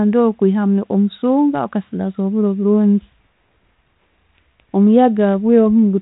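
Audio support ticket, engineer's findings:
Nothing stood out on listening, with the speech carried over a 32 kbit/s G.726 telephone-band path.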